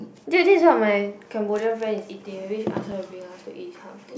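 At 2.92 s the output path drops a block of digital silence: for about 5 ms the audio drops out to silence, the kind of gap left when the audio stream misses a deadline and an empty stretch goes out in place of real data. Because the speech cuts straight to zero and resumes with no fade, both edges form abrupt steps in the waveform. At this length the two steps merge into a single sharp tick rather than an audible hole.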